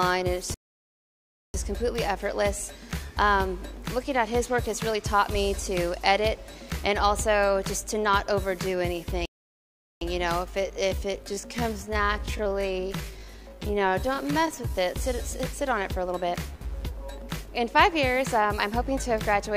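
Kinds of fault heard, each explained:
Playback stall: the sound cuts out mid-flow and goes silent for about a second from 0.54 s, and again for about 0.76 s from 9.25 s, then carries on. That's likely the player running dry on data or its thread getting blocked until it caught up.
Time-stretched section: from 10.47 s to 14.89 s the pace suddenly drops to about 0.7 times normal speed while the pitch holds steady. That's likely software stretching the audio to fill a length by repeating short pieces, so it drags.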